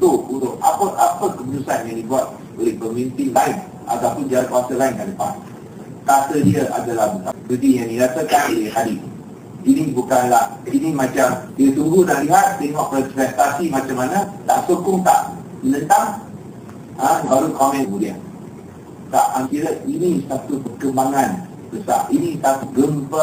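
Damaged data in a compressed stream shows up four times: at 7.29 s for about 0.04 s, at 11.47 s for about 0.06 s, at 17.23 s for about 0.06 s, and at 19.42 s for about 0.06 s. At each point some of the encoded bytes were corrupted, so the decoder misread those frames, lost sync and had to hunt for the next valid frame header. Each event is a brief chirp or blip cutting into the audio.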